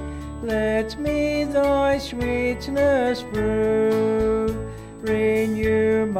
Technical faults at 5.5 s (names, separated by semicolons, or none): USB whine